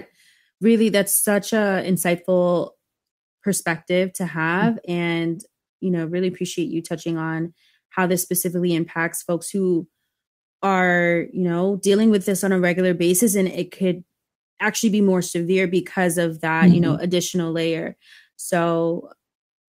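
Lost packets rebuilt from error correction: low-bitrate copies filled the losses at 3.73–3.87 s and 11.99–12.09 s, so there is no gap, but the speech turns briefly rougher and noisier.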